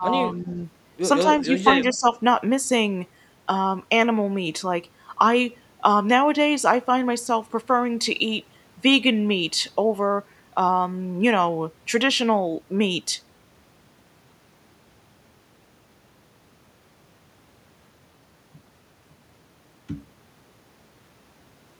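The speech dips at 0.0 to 0.11 s, 0.31 to 0.58 s and 1.24 to 2.06 s, by up to about 10 dB. This is likely speech suppressed in double talk.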